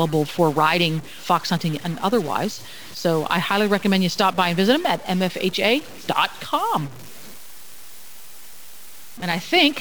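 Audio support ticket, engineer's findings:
Stuck bit, whole clip. Noisy distortion riding on the speech, and the pauses aren't clean: they fill with a steady noise instead of going quiet. Likely one converter or data line bit jammed at a fixed value, so about half the samples land off by that bit's weight. The error flips around small values near zero, hence the noise floor in the gaps. Worth checking the ADC wiring or interface first.

Dropped buffer (overrun), 2.69 s. A tiny forward jump in the sound, no gap or dropout. Only a sliver is missing, around a millisecond and a half, so no syllable is actually lost. Likely the capture side fell behind and the hardware overwrote a chunk before it was read, leaving the two ends butted straight together. Look at buffer sizing and scheduling priority on the recording host.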